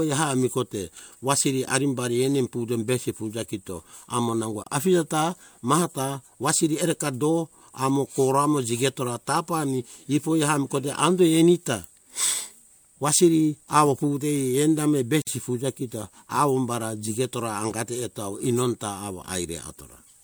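The speech drops into brief silence with smeared edges: about 26 ms at 4.64 to 4.66 s, after "fuja kito amo nango", and about 52 ms at 15.22 to 15.27 s, before "fuja kito awo umbara". Each is a gap at a join of encoded pieces, where separately encoded sections were butted together with their encoder start delay and end padding left in.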